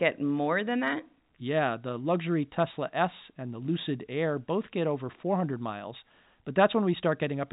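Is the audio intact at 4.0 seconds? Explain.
Yes, at 4.0 seconds the speech is intact, with no dropout, click or other fault.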